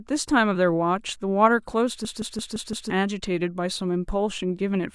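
A system hang loop runs from 2.05 to 2.90 s. The computer or its audio driver stalled while the sound hardware kept replaying the same ring buffer. One 171 ms slice of the speech therefore repeats exactly five times at 5.86 Hz, which fits a 4096-sample buffer. At that length the repeats give a choppy machine-gun stutter rather than a steady buzz, and about a second of the speech never arrives.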